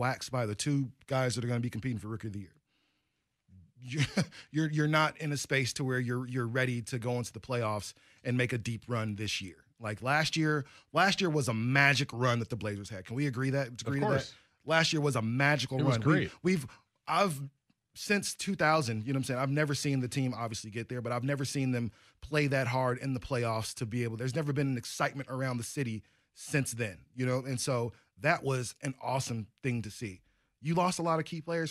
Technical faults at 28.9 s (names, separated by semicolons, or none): none